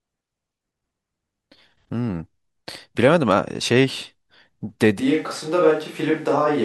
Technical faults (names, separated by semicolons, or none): switch to a distant microphone